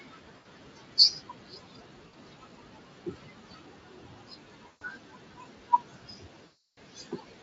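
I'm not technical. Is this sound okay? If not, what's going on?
No. The background noise keeps dipping between phrases and swelling back under them. These are noise suppressor artifacts: a cleanup filter keeps guessing which parts are steady noise and turning them down, moment by moment, throughout the clip.

That same filter also mistakes real speech for noise. Across nearly the whole clip, soft sounds and word endings come out faint or swallowed. This is speech cut by the noise suppressor, and at its worst it pulls the voice down sharply along with the background.

There are also four brief glitches where the voice smears into a buzzy or hissy tone that fades out, at 0.37 to 0.45 s, 2.07 to 2.13 s, 4.67 to 4.83 s, and the longest at 6.45 to 6.78 s. This is VoIP packet loss concealed by the speech codec. Pieces of the call went missing in transit, and the receiving end filled each gap by stretching out the last sound it had. 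The voice stays weak or distorted for a moment just after each gap.

The room's own background noise is part of the original recording and sits well below the voice.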